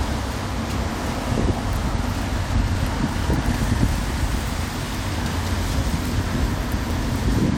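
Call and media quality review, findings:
Dropped buffer (overrun), likely capture side: samples not read before the hardware overwrote them, so the audio joins across the gap with no silence. Small forward jump at 2.75 s (about 10 ms lost) and 6.90 s (about 20 ms lost).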